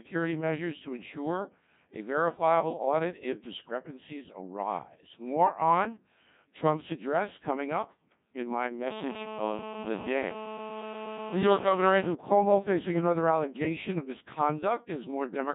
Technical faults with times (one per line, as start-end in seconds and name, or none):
0.00-15.54 Codec 2 vocoder